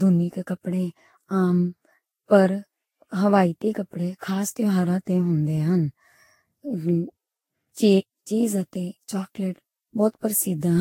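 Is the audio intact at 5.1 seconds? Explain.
No, at 5.1 s, as throughout, the speech carries generation loss, likely from about seven repeated lossy encodes near 55 kbit/s. Unlike a single low-bitrate pass, it sounds swirly, hollow and smeared, with blurred attacks and nothing above 16.6 kHz.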